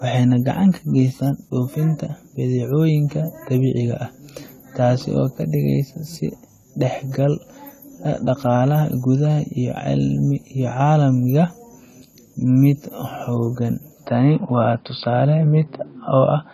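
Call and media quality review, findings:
AAC compression, throughout: dull, smeared, with plainly audible warble and fizz on sustained vowels and sibilants; nothing above 14 kHz. Likely AAC-LC at a low bitrate, which fits 32 kbps. Coarse quantisation leaves spectral holes and noise-filled bands.

Input switched to a poorer device, 14.06 s to end: sudden narrowing to nothing above 5 kHz, boxy tone, level shift of a few dB, faint new background noise, no gap at the switch. Likely a change to a narrower-band microphone or headset call profile.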